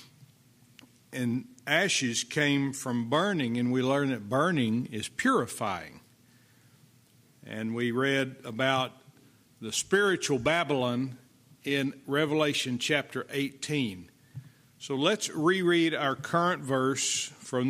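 Two devices likely running on slightly different clocks, off by some tens of parts per million, let the buffer between them drift until a handful of samples is dropped or repeated. These clock drift buffer slips sound as regular clicks every 2.93 s, from 2.34 s to 16.98 s.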